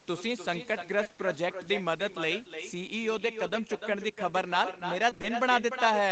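Throughout the speech, every phrase returns a moment later as a fainter copy. This is echo with no canceller. The far end played the call on a loudspeaker, and its microphone picked that sound up again. Nothing removed it before it travelled back. The copy trails the original by roughly 300 ms, about 9 dB quieter. It sounds thinner than the direct voice, like a shadow following each syllable.

At 1.03 s a brief hitch appears, and a second follows at 1.07 s. Together they run to about 1.11 s. This is short concealed packet loss, twice in a row. Each hole is about 20 ms of audio that arrived too late to decode. The receiver patched it by extending the preceding sound, then blended back into the real signal. The result is a quick smear or wobble, nearly 80 ms long in total.

From 5.09 s to 5.25 s the sound turns choppy. This is repeated packet loss, giving a robotic quality. The pattern points to four separate 20 ms holes within that 160 ms stretch. 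Half of the span is therefore patched rather than real. Each gap is filled by continuing the last sound, and the next one arrives almost at once. The repeated patching breaks the flow and leaves pieces of sound missing.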